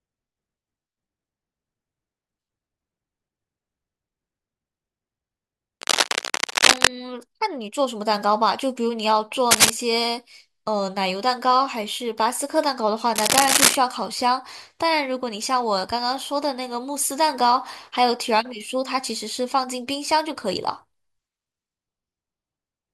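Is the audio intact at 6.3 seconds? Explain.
No. From about 5.81 to 6.88 s there's cable scratch noise: dense, ragged bursts of scratching and rustling riding a little above the speech. It's likely a worn cable or connector being moved, so its contact resistance flickers and spits noise into the signal.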